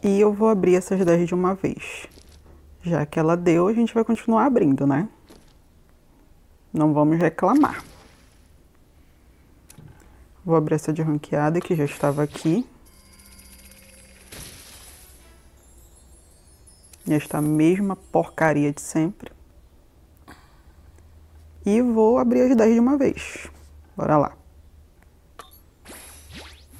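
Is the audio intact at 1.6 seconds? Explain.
No. The moment falls inside a run of periodic USB or driver dropouts lasting from 0.07 to 26.69 s. Every 1.024 s, something blocks the audio path and about a millisecond of sound becomes silence. The gaps are heard as regular ticks wherever there is signal.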